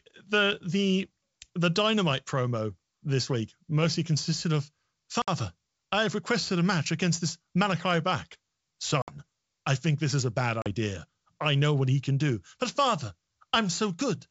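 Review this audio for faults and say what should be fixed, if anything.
Packet loss on an ADPCM call: hard-edged holes at 5.22 s after "week mostly consisted of" (60 ms), 9.02 s before "I think this is" (60 ms), and 10.62 s after "this is a bad" (40 ms), each a few packets long. Unlike a plain dropout, the audio returns with brief, slight distortion while the decoder's predictor and step size resync. Adding jitter buffering and packet-loss concealment that resets the ADPCM decoder state would prevent it.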